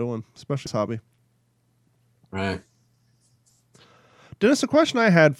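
At 0.66 s a tick and a very brief mute break the speech, which then resumes from a different point: a CD skip, where the laser jumped to another turn of the spiral.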